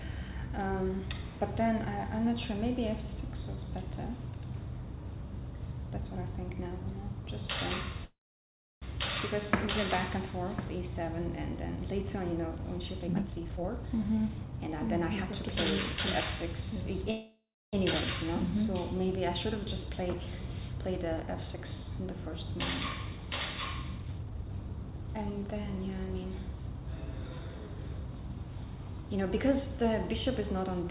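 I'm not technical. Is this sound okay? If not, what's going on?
No. It has two kinds of problems, each happening twice.

The first is a call audio freeze, at 8.04 s and again at 17.11 s. The likely cause is that pieces of the audio got held up on their way across the network, so the receiving end briefly ran out of sound to play. It stretched out the last bit it had as a fading buzz or hiss, then went quiet for about 0.67 s the first time and 0.3 s the second. Each pause lasts about 0.78 s and 0.62 s in total. When the audio resumes, it picks up right where it stopped, so nothing is lost, but everything after it arrives later.

The second is a jitter buffer speed-up, from 13.00 to 14.53 s and from 23.98 to 25.32 s. The receiver had built up a backlog of waiting audio. To catch up, it snipped out many tiny slices, roughly 0.7 s in total each time. That makes the sound run about one and a half times faster (152% and 145%) without changing its pitch, so those stretches sound rushed.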